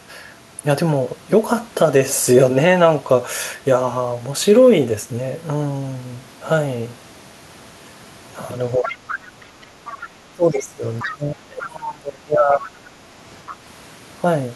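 In this speech recording the talker's level sinks during 8.77–9.46 s, by about 20 dB at its deepest, and again across 10.33–12.66 s, dropping by about 30 dB. This is speech suppressed in double talk, likely caused by an echo canceller that could not tell the local talker from loudspeaker echo and ducked both. A second, fainter voice also surfaces at 8.83–9.15, 9.62–10.02, 10.54–10.6, 10.99–11.16, 12.63–12.67 and 13.47–13.56 s, about 10 to 25 dB below the speech. That is the other side's voice leaking through, likely loudspeaker playback the echo canceller left in the microphone signal.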